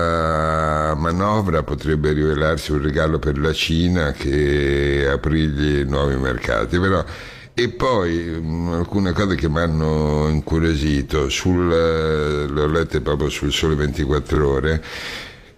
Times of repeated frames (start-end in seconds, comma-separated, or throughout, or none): 14.35-14.38